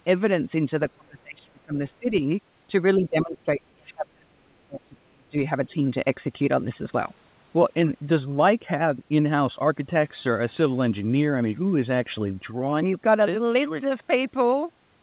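Speech suppressed in double talk, likely, dims the speech at 0.94–1.77, 1.99–2.14, 2.97–5.37 and 5.67–5.72 s by up to roughly 35 dB, dipping, losing its high end or cutting out in pieces.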